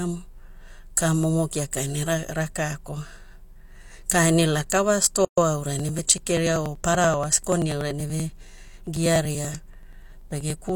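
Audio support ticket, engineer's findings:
Gap at a join of encoded pieces, 5.25 to 5.38 s. Roughly 127 ms gap cutting into continuous speech, edges smeared, then resumes where it stopped. Likely separately encoded segments joined untrimmed; encoder start delay plus last-frame padding kept.

Periodic USB or driver dropouts, 5.80 to 10.69 s. Evenly spaced ticks every 96 ms, about fifty in total, audible only over speech. Each loses a few milliseconds, skipped rather than silence-filled. Background task blocking USB bus or audio driver at fixed interval.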